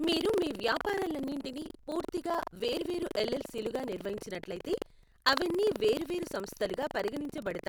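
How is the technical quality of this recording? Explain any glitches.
The recording is marred throughout by a rattling buzz. Buffer tearing runs the whole clip: writer and reader cross each period, splicing in about a tenth of audio roughly 100 ms stale. The result is a 23.4 Hz robotic rattle, which fits a 2048-sample buffer. Unlike steady hum, it vanishes in pauses.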